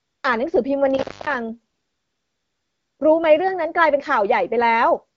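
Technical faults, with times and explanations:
0.00 to 0.23 s, AMR comfort noise: the phone judged the line silent and stopped sending speech frames, so the receiver substituted smooth synthetic noise for the real background.
0.91 to 1.38 s, intermittent contact: a loose connection opened for about 256 ms, cutting the sound out with crackle at the edges and faint hiss during the gap.
1.73 to 2.99 s, AMR comfort noise: speech frames stopped again for 1.26 s, and generated noise of a coarse level and spectrum replaced the genuine background, switching in and out.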